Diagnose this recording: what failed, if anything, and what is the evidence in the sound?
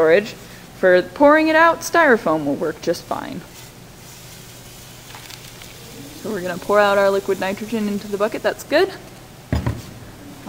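GSM signalling bursts, 7.99–9.18 s: analogue wiring rectifies a nearby 2G phone's pulses into galloping ticks and 217 Hz buzzes, about 25 dB down.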